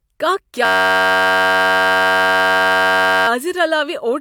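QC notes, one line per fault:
0.65–3.28 s, system hang loop: a 10.67 ms piece repeats hundreds of times, giving a steady 93.8 Hz buzz, which fits a 512-sample buffer cycling while the system froze.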